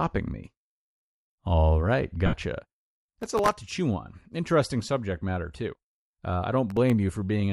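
Throughout, a low-bitrate transform codec, likely Bluetooth LC3 compression, strips much of the upper spectrum and fills it with noise. The speech carries a plainly audible breathy, grainy edge, consistent with LC3 at around 48 kbps using 7.5 ms frames.

From 2.26 to 2.33 s, lost LE Audio frames force the decoder to rebuild about 67.5 ms of audio, which fits roughly nine 7.5 ms frames, by reusing the last spectrum with scrambled signs. The speech briefly turns into a noisy, smeared hiss before proper decoding resumes.

From 3.21 to 3.54 s, just before "to chew on", the processor repeatedly misses its deadlines for very short buffers of well under a millisecond, about a couple of dozen times in a row. Each miss replays a scrap of old audio with hard edges, heard as processor overload crackle, a gritty tearing over the speech. A shorter burst of the same crackle, from about half a dozen missed buffers, returns from 6.70 to 6.90 s.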